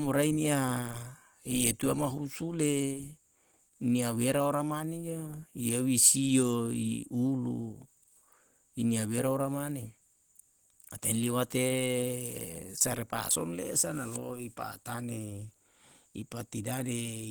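Across the whole clip the speech has a hoarse, grainy texture and a smeared, muffled quality, most likely from Opus compression at a rate that points to around 16 kbps in hybrid mode. The low band is coded by a speech model while the upper range is rebuilt from coarse band energies with filled-in noise. On a spectrogram energy still reaches about 20.1 kHz, but the upper bands look speckled and blurred rather than finely detailed.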